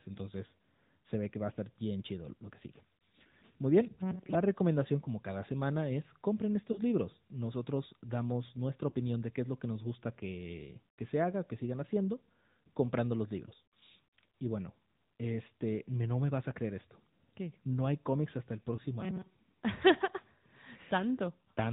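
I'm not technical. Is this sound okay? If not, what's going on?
No. The whole recording has the AMR narrowband mobile codec sound of an old-style phone call. Everything above 4 kHz is cut off, and the voice sounds buzzy and synthetic.

There are also lost AMR speech frames. The sound briefly dips or warbles at 1.54–1.57, 6.72–6.80, 8.90–8.94 and 18.76–18.79 seconds, where the phone filled in missing pieces by guessing.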